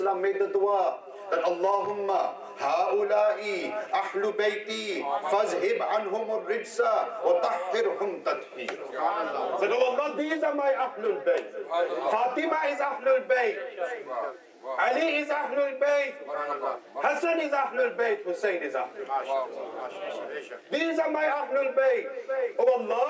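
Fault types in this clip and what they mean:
No technical faults can be heard in this clip. There is nothing to list for any part of the audio.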